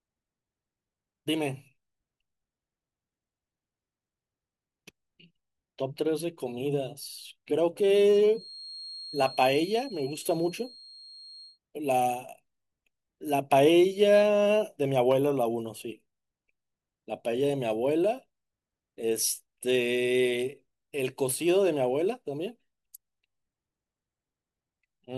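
A speech recording with a feedback whistle from 8.27 to 11.60 s: a thin, steady tone at 4.2 kHz, around 20 dB below the speech, swelling and fading slowly in level. It likely comes from a loudspeaker-to-microphone loop sitting just at the edge of feedback. On a spectrogram it shows as a narrow horizontal line at 4.2 kHz, but it is hard to see in the waveform.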